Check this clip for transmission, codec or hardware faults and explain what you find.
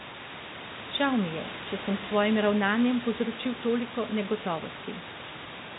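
Nothing stood out on listening that would point to a transmission, codec or hardware problem in this speech recording.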